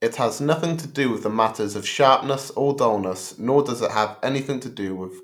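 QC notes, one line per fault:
Speech clip checked by ear with nothing to flag.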